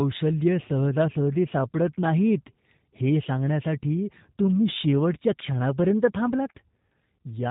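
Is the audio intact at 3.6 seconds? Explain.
No. At 3.6 seconds, as throughout the clip, the speech sounds rough and slightly synthetic, with nothing above 4 kHz. That is G.729 codec damage, consistent with an 8 kbit/s stream, where speech is rebuilt from a vocal tract filter, pitch predictor and sparse pulses.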